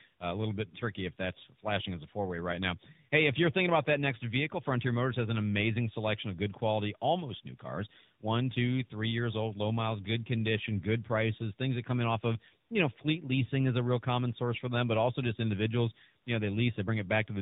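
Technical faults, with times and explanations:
Throughout: tandem speech coding. The speech has that doubled mobile-codec roughness, with a grainy, warbly edge and a muffled top where nothing gets above about 3.8 kHz. It sounds like two AMR-NB passes in a row, probably around 12.2 and 10.2 kbit/s, with a plain G.711 mu-law link between them. Each crossing decodes the audio and codes it again, so the second coder ends up modelling the first coder's artefacts, and the damage stacks.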